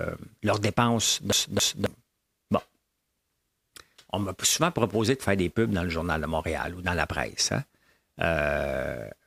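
From 1.32 to 1.86 s, the CD is stuck on one turn: the laser jumps back repeatedly, so a 270 ms slice of speech plays twice with a brief mute at each jump.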